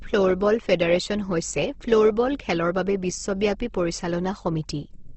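Throughout the speech, nothing reaches above 8.2 kHz, and the sound turns rough and grainy rather than swirly. Weak bands are filled with noise instead of left as holes, as MP3 would leave them. This is likely Opus compression in CELT mode, at a rate fitting roughly 16 kbps.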